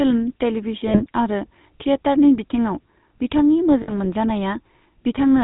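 Throughout the clip the speech carries the gravelly, buzzy roughness of the GSM full-rate codec, plainly audible. The coder describes the vocal tract with a filter and excites it with a sparse, regularly spaced pulse train that keeps only one excitation sample in three, so fine detail in the voice is replaced by a coarse grain. Nothing above 4 kHz survives, which dulls the top end. The overall character fits 13 kbps full-rate coding.

From 0.88 to 1.03 s, and again from 3.82 to 3.91 s, there are lost GSM frames, each gap about 60 ms long, which fits three consecutive 20 ms frames. The decoder covers the gap by reusing the parameters of the last good frame, so the sound briefly freezes into a rough, metallic ring instead of dropping out. Both gaps are short enough that this held ring is heard rather than a fade to silence.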